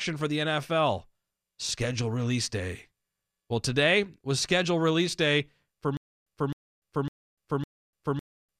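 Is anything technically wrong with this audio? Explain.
Yes. From 5.97 s to the end of the speech clip there is a stutter with silent gaps. A 261 ms fragment plays, then about 294 ms of silence, repeating every 556 ms, four times. This is likely a player or stream stalling and replaying its last buffered fragment on each retry before running dry, so the audio meant for that stretch never arrives. Unlike a seamless loop stutter, each repeat is followed by dead silence, and the even spacing sets it apart from random dropouts.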